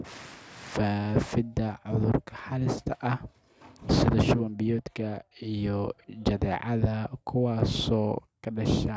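No technical faults can be heard anywhere in the recording.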